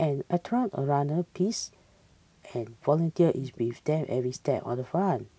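At 1.71 s and again at 3.52 s, a short delayed copy of the speech surfaces for about 60 ms, likely an echo leak from a loudspeaker-side echo canceller, trailing the original by 373 ms. The first is barely audible and the second clearly louder. On a spectrogram each shows as a faint smear repeating earlier harmonics, capped at 8 kHz like the call audio itself.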